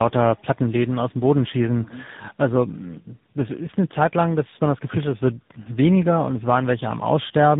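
Throughout, the speech carries tandem speech coding: it passed through three speech codecs in a row (GSM full rate, CVSD, then AMR-NB at 10.2 kbit/s), each re-coding the previous one's damage. Unlike one low-bitrate codec, roughness and warble compound, with nothing above 3.8 kHz.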